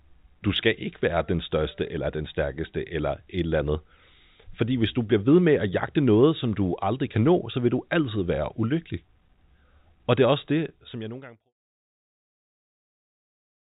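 Nothing in this speech recording is technically wrong. It has passed through a call path with nothing above 4 kHz, which fits G.711 A-law at 64 kbps, and it fades out smoothly from around 10 s to 11.54 s.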